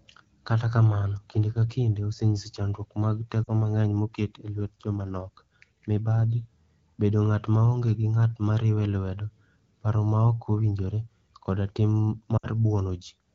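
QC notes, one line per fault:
3.44–3.49 s, lost AMR speech frames: right after "chandruok mag" the sound briefly smears and dips for about 40 ms, which fits two dropped 20 ms frames. The AMR-WB decoder, running cleanly at 12.65 kbit/s, fills the gap by reusing the last good pitch and vocal tract settings at falling gain. Sound resumes at "mang'eny moket e lwet".
12.37–12.48 s, lost AMR speech frames: after "ok owinjore koda tim" the sound fades to near silence for about 60 ms, consistent with three lost frames concealed with decaying gain, and comes back briefly weak.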